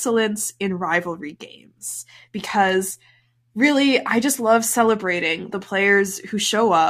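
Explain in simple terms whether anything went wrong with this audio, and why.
No faults can be heard.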